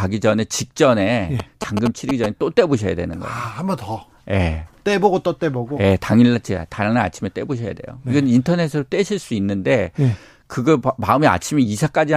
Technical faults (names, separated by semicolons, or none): GSM signalling bursts